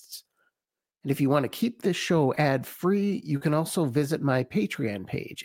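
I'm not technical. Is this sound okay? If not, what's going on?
No. There are two spots of short concealed packet loss, at 2.35 to 2.39 s and 3.37 to 3.43 s. Tiny pieces of the speech arrived too late. The receiver filled each gap by stretching the sound just before it. You hear a brief smear or wobble.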